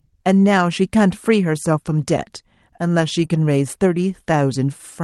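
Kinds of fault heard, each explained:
Lost packet rebuilt from error correction: From 3.19 to 3.25 s, about 40 ms of audio, consistent with two lost packets, was played from the low-bitrate backup copy carried in the following packet, so there is no gap, only a rougher, noisier stretch.
Short concealed packet loss: Right after that, around 3.27 to 3.31 s, about 20 ms never arrived and had no backup. The decoder extended the preceding sound to fill it before blending back into real audio, leaving a brief smear or wobble.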